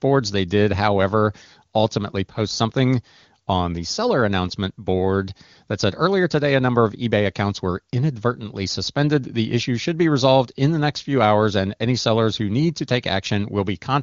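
No technical faults can be heard in the speech, which carries the band-limited character of wideband AMR coding, with nothing above about 7.4 kHz and coding at a high rate, likely the top 23.85 kbit/s mode, that leaves little or no audible damage.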